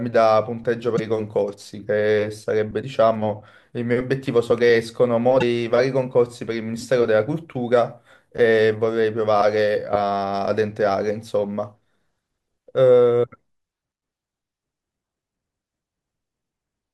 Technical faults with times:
0.95-1.00 broken MP3 bit reservoir
2.81-2.84 broken MP3 bit reservoir
5.40-5.43 broken MP3 bit reservoir

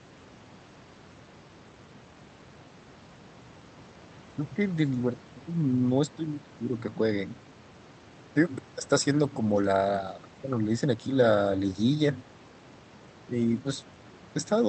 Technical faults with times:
none

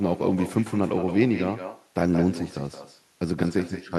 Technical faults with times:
0.00-3.98 echo with no canceller

